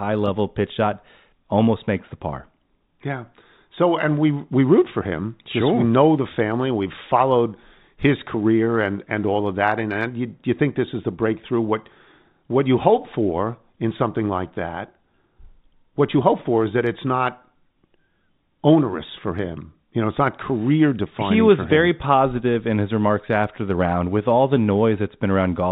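No technical faults can be heard in this speech.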